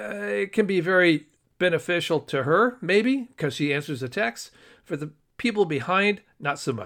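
No technical faults are audible anywhere in the recording.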